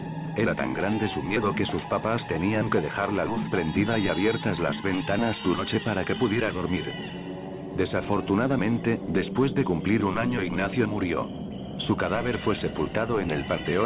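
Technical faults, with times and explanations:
5.54–5.65 s, skip ahead: roughly 0.4 s of audio is missing, and playback lands directly on later sound with nothing filled in, because a stretch was dropped, on the way or by the jitter buffer, while later audio was already waiting. Unlike a dropout, there is no silent gap, only an abrupt join.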